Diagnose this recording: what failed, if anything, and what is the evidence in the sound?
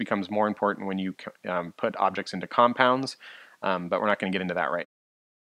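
Nothing in this recording points to a failure at any stage of the chain. The only change in level is a smooth fade-out near the end, around 4.9 to 5 s, which eases down without any step or click, just as an editor would shape it.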